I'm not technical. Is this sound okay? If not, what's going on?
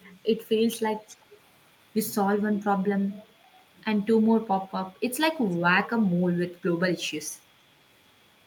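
No. From 1.08 to 1.38 s a faint, delayed copy of the speech returns about 0.38 s late, with a very faint scrap at 4.68 to 4.72 s. This is an echo leak, likely from a loudspeaker on the far end. Unlike room reverberation, it is a distinct repeat, not a smear.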